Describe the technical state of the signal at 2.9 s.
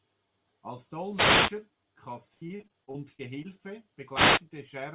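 At 2.9 s the signal sits inside a stretch of repeated packet loss (robotic sound) running from 2.34 to 3.46 s. Nine holes open up in the stream, the longest 74 ms, and each is patched by extending the preceding sound, so about a quarter of that span is concealment rather than real audio. The result is choppy speech with fragments missing. The band stops at 4 kHz, consistent with a narrowband telephone codec.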